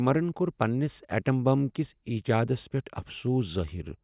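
Nothing here calls for comment, since the speech comes through without any audible fault at any point in the recording.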